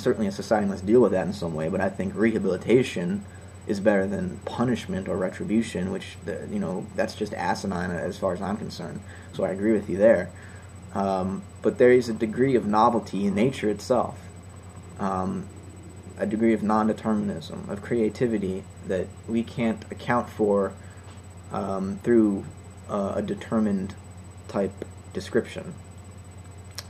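No technical fault can be heard anywhere in this recording. No dropout, distortion or timing problem occurs at any point in the audio.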